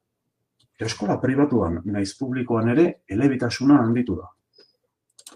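No technical faults can be heard anywhere in the speech recording.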